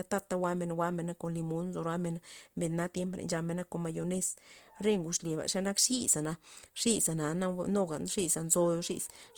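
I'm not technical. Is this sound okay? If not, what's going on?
No. Throughout, the speech sounds rough, grainy and noisy. The likely cause is Opus compression squeezing the audio hard, which smears fine detail into a hiss-like texture.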